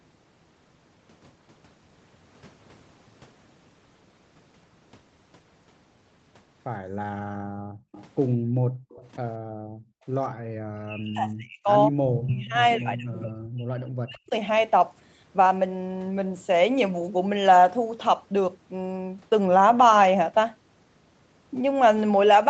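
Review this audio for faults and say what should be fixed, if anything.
Background gated by the echo canceller cuts the room sound from 6.80 to 7.92 s and again from 8.36 to 8.89 s, by about 40 dB at the deepest, for roughly a second and half a second, while the far-end loudspeaker played. The waveform shows the noise floor collapsing to near-flat, and the spectrogram a blank band. Gentler suppression with comfort noise would prevent it.

Echo leak appears at 7.92 to 8.04 s and 8.89 to 9.10 s, a copy delayed 192 ms at about 25 and 30 dB under the speech, and from 12.70 to 13.46 s at 156 ms, about 15 dB down. This is likely residual loudspeaker pickup the canceller missed, seen as faint repeated harmonic stripes offset in time. Better echo-path modelling or a headset would prevent it.

Speech suppressed in double talk dips the near talker from 9.41 to 9.95 s and from 10.57 to 14.33 s, by around 40 dB at worst, over roughly half a second and three seconds, likely because both sides spoke at once. 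The waveform shows chopped, hollowed envelopes, and the spectrogram shows harmonics blinking out with upper bands thinned. Stronger double-talk detection would prevent it.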